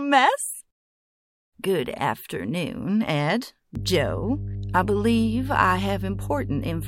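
Mains hum enters at 3.75 s and runs to the end. The 50 Hz power line is leaking into the signal through a ground loop or nearby transformer, giving a steady low drone with some low harmonics, loud enough to sit only slightly beneath the sound itself.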